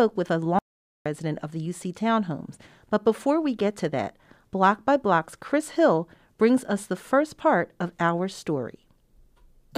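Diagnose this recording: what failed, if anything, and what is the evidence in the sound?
The input signal was likely cut off upstream of the recorder, through a lost device connection or link, while writing continued. The result is an audio dropout to silence from 0.59 to 1.06 s, between "with a" and "of the": about 0.47 s of silence with no room tone, and the speech in that gap is gone.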